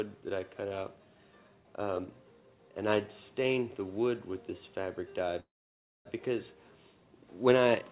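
From 5.4 to 6.07 s a call audio freeze holds the sound: a brief fading continuation, then 0.59 s of silence, likely from delayed packets draining the jitter buffer. Unlike a dropout, nothing is lost, and the audio resumes exactly where it stopped, 0.65 s late.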